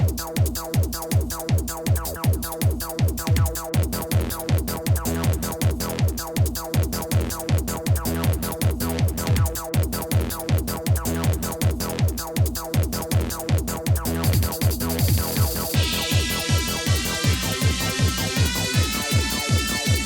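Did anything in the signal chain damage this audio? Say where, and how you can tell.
No, nothing in the signal chain damaged this audio.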